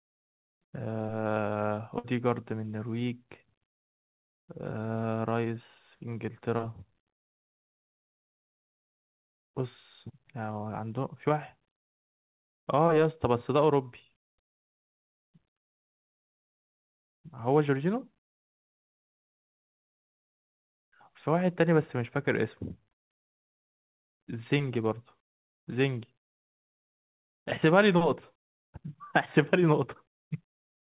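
At 1.98 s, a burst of packet loss begins and runs to 2.06 s. About 60 ms of speech arrived too late or not at all. The receiver continued the last sound for about 58 ms, fading it down. Speech then resumes further on, with that part missing.

At 22.92 s comes a short concealed packet loss, ending at 22.95 s. About 20 ms never reached the decoder in time. The receiver filled about 10 ms by extending the previous sound, then blended back. It is heard as a brief smear or wobble.

Throughout, the speech keeps the narrow sound of the call codec, with nothing above 4 kHz.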